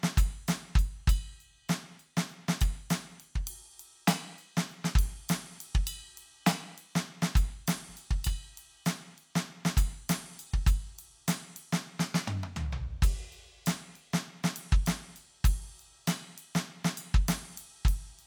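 No technical faults occur at any point in this music, so there is nothing to describe in time order.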